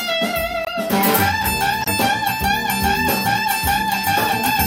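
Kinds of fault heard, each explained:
Corrupt frame muted: Flipped bits left compressed frames undecodable, so the player substituted silence. The sound drops out abruptly for 40 ms at 0.65 s, consistent with a single lost frame, and for 46 ms at 1.83 s, likely two adjacent frames, with timing preserved.
Corrupt frame decoded: A frame with flipped bits was decoded anyway, so misread gains and codes placed energy at wrong frequencies. Around 3.43 to 3.47 s, spanning roughly two frames, a short burst of misplaced energy appears, peaking near -10 dBFS.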